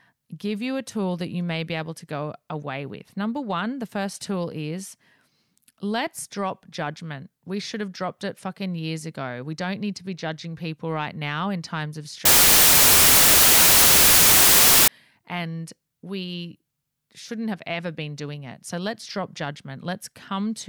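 Speech, with a wrong sample width fault from 12.25 s to 14.88 s. Over that stretch the audio collapses into loud, hissy noise with the speech buried inside it, dragged down to half speed, so its pitch falls by an octave. The sound points to 32-bit integer samples being read as 16-bit. Each original sample splits into two values: the upper half still follows the waveform, while the lower half contributes pure noise, and the doubled sample count halves the playback rate.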